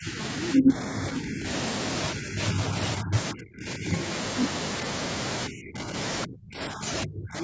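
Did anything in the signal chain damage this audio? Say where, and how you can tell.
Yes. In the call processing stage, the echo canceller likely mistook double talk for echo and clamped the near talker. The result is speech suppressed in double talk from 0.0, 0.38, 2.14, 2.97, 3.33, 5.48, 6.26 and 7.04 s. Each dip is from about 10 to 40 dB, and deepest near 6.3 s.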